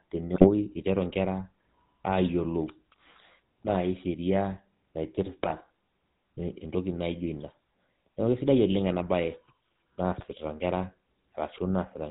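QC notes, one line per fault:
Throughout, GSM full-rate codec: the speech carries a steady buzzy, gravelly roughness, and nothing reaches past 4 kHz, so sibilants are dulled and upper harmonics are gone. The coder rebuilds each stretch from a vocal-tract filter excited by evenly spaced pulses that keep only one excitation sample in three, and that coarse excitation is the source of the grit. The damage is plainly audible and fits a 13 kbps full-rate stream.
0.34–0.49 s, 3.62–3.77 s, 5.43–5.53 s and 10.18–10.25 s, GSM bit errors: four short bursts, each about 0.07 to 0.15 s long, where the speech breaks into squawks, pops and gargling. Corrupted bits reached the decoder and garbled the filter, pitch and gain values, so the spectrum warps and the level jumps for a few 20 ms frames at a time. This is consistent with roughly 1.5 to 2.2 percent of bits flipped in each burst.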